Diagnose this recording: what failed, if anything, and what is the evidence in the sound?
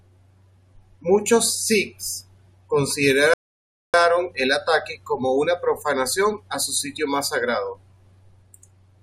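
A rebuffering stall at the playback stage interrupts the speech at 3.34 s: the audio drops to silence until 3.94 s, then resumes with "el ataque como una" exactly where it left off. The player exhausted its downloaded audio and waited for more data, adding about 0.6 s without losing any material. On a waveform this is a dead-flat line; a spectrogram shows a clean, fully blank vertical band with the speech continuing seamlessly on either side.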